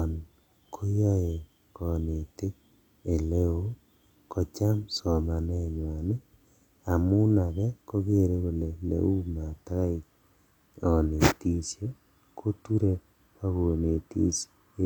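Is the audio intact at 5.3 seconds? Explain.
Yes, the speech at 5.3 seconds plays through cleanly, with no dropout, click, distortion or other technical fault at that moment.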